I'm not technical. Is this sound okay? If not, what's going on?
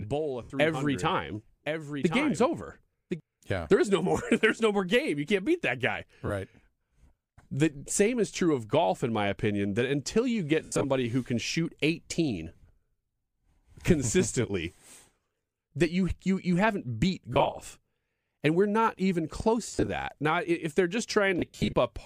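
No. From the start to 3.2 s there is a doubled audio track: a second, somewhat quieter copy of the same sound runs about a second behind the first, then cuts off abruptly. The likely cause is the audio being captured twice, with one path slower.

The clip also has lost LE Audio frames, where Bluetooth packets went missing and the receiver filled the gaps with a brief noisy smear. This happens at 0.43 s, at 6.27 s after "can't beat that guy", at 10.6–10.85 s between "opinion that until you" and "who can shoot", at 17.33–17.61 s, at 19.71–19.88 s after "we're not even close", and at 21.39–21.73 s.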